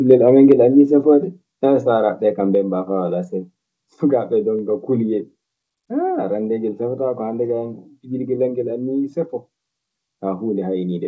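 From 0.1 to 0.52 s the loudest syllables carry a harsh, crackling edge, their peaks sounding flattened and gritty. This is microphone overload, likely from an input volume set high enough that peaks exceeded the converter's limit by about 2 dB, clipping a small share of samples.

At 0.52 s, right as that distortion ends, voice and background drop together in one abrupt step of about 2 dB. That is the microphone volume stepped down, likely the call software lowering the device's input gain in a single move once it detected the clipping.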